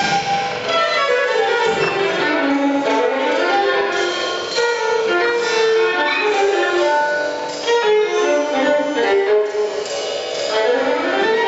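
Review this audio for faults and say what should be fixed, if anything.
Throughout the clip, every sound is followed by a copy of itself about 43 ms later at the same level, a clear doubling or single slap. This is channel delay (doubling). One channel arrives a long buffer late, which fits a 2048-sample buffer, and when the two are folded to mono the late copy stands apart. Room reflections would arrive at several spacings, fade, and come back weaker. This is one repeat at a fixed gap and full strength. Align the channels before any mono downmix, or take a single channel, so the buffer offset cannot be summed in.

Gain pumping also runs through the whole recording. The gain swings by roughly 10 dB, so loud and soft passages sit close together and everything feels squashed. The likely cause is input gain set far too high for the microphone, with a fast limiter or compressor clamping down on each peak. 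A noise gate would cut the gaps to silence. Lower the microphone input gain so the limiter rarely engages. The call microphone processing's band limit, with nothing above 8 kHz, is expected and needs no fixing.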